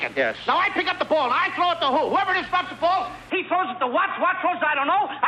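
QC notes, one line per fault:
3.30–5.28 s, input switched to a poorer device: the sound abruptly turns duller and boxier with no gap at the change, nothing reaching above 3.8 kHz, a new noise floor roughly 30 dB under the signal and little level shift; likely a narrower-band microphone or headset profile.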